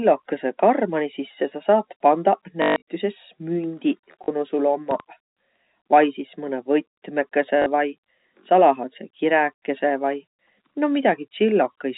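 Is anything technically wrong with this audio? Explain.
Yes, there are two kinds of fault. First, packet loss with the last packet repeated. Around 2.62 to 2.82 s, about 180 ms of the sound drops out, with the longest gap at 140 ms. Shorter 40 ms gaps hit at 4.24 s, right before "nu sul", and at 7.62 s. Each time, the receiver loops the last packet it got, and the loop seldom lines up with the pitch. The longer run buzzes at about 50 Hz, which fits 20 ms packets, so you hear a short robotic stutter.

Second, there's a loud pop from 4.91 to 5.02 s, just after "nu sul". It's actually two pops close together, peaking a few dB above the speech, which keeps going underneath. That sounds like a sudden voltage step or pulse getting into the signal, likely from a plug, a switch, static or a driver glitch.

All of this sits on a telephone-band G.711 signal, so there's nothing above 4 kHz.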